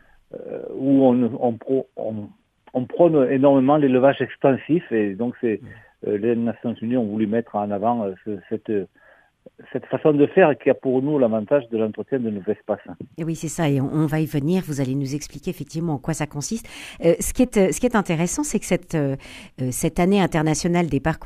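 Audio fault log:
No faults heard at any point in the clip; nothing to log.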